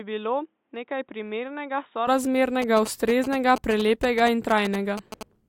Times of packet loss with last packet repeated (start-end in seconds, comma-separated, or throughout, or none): none